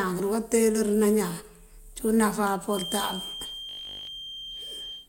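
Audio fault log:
2.66–5.08 s, feedback whistle: a loudspeaker-to-microphone loop likely sitting at the feedback point sustains a thin, slightly wavering 3.2 kHz whistle about 15 dB under the speech.
3.69–4.07 s, robotic sound from repeated short buffers: late audio is likely patched by looping short chunks, fitting a 20 ms buffer, so most of the speech becomes a rigid 50 Hz buzz.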